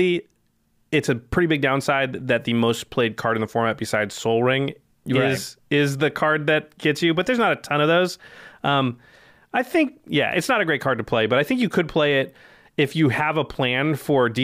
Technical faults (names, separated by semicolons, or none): none